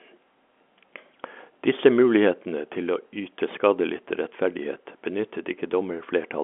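No technical faults turn up anywhere in this speech.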